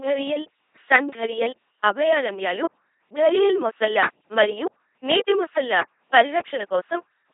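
Throughout, heavy LPC-10 vocoder damage, consistent with 2.4 kbit/s: buzzy robotic speech from pulse-or-noise excitation; the spectrogram shows rigid harmonic striations and nothing above 3.8 kHz.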